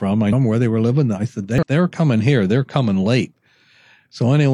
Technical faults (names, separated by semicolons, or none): damaged data in a compressed stream